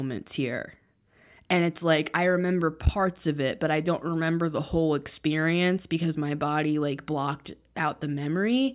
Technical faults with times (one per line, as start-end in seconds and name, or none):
none